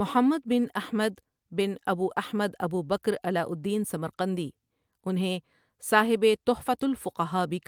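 At 2.11 to 2.13 s, just before "احمد ابو", a lost packet rebuilt from error correction: a 20 ms stretch, which fits one packet, plays as a rougher, noisier patch without a gap.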